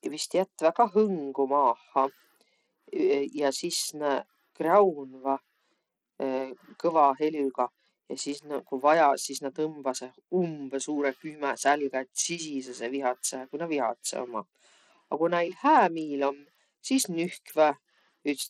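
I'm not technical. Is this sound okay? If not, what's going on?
No, not quite. All the way through, the speech has a gritty, fizzy edge, and the crisp high end keeps dropping out or flickering, so it sounds dull and rough at once. That's most likely Bluetooth SBC compression, the basic codec Bluetooth falls back on. Squeezed this tight, it gives the top frequencies too few bits, starving or dropping them, and coarsely rounds off the rest, which causes that grainy noise.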